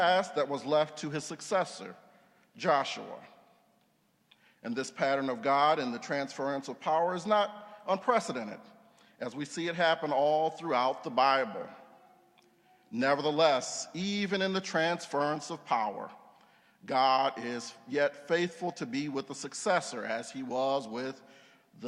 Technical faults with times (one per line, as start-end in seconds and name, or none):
none